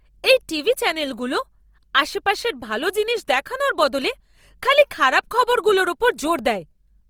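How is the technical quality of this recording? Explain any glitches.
The recording has one audible fault that runs through the entire speech clip: plainly audible Opus compression damage, likely from an Opus encoder working in its music (CELT) mode at a rate that fits roughly 24 kbps. With too few bits, each frequency band's energy is kept, but the fine detail inside is replaced by folded copies of lower bands or by noise. The voice therefore sounds grainy and rough rather than swirly. Bandwidth stays full, reaching about 20.3 kHz. On a spectrogram, harmonics blur into hazy, textured patches instead of clean lines, with few empty holes. The waveform looks ordinary.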